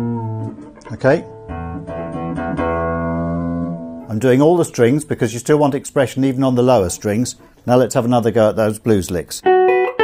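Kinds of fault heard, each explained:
Adaptive stream starting at a low bitrate: The player began on a low-quality version. Until 4.0 s nothing sounds above 9.6 kHz. Then fuller treble returns abruptly, with no gap.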